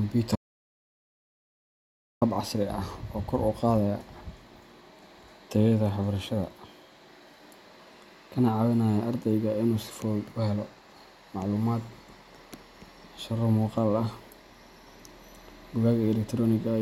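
From 0.36 s to 2.21 s the speech drops out to total silence, an audio dropout to silence lasting about 1.86 s. No room tone remains. The input was likely lost while silence kept being written. The sound returns abruptly on "hab casri ah oo".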